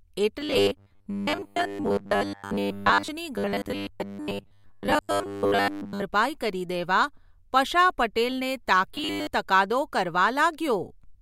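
Audio likely arrived too seldom during three spans of this speech clip, and the player filled the gaps by looping the last 10 ms of sound, skipping most of the real signal. The result is robotic sound from repeated short buffers, a rigid 100 Hz metallic buzz, from 0.41 to 3.08 s, 3.36 to 6.02 s and 8.95 to 9.27 s.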